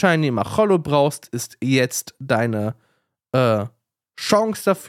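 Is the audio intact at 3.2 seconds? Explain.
Yes, the speech is intact at 3.2 seconds, with no audible fault at that moment.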